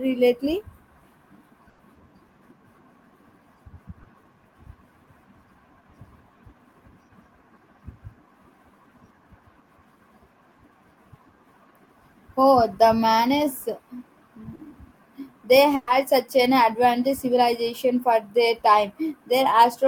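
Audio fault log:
1.69–1.81 s, burst of packet loss. About 100 ms never arrived. The receiver stretched the last sound and faded it, giving a held buzz or dying hiss. The sound jumps ahead, with 100 ms missing.
15.75–15.89 s, burst of packet loss. Here 120 ms were lost. The same fading extension covers the hole without silence. The audio then resumes later, skipping 120 ms.
4.03–4.07 s, short concealed packet loss. About 20 ms arrived too late. The decoder continued the last sound, then blended back. It leaves a brief smear or wobble.
14.55–14.61 s, short concealed packet loss. About 40 ms were patched by continuing the previous sound. The join sounds like a short wobble. A brief consonant may drop out.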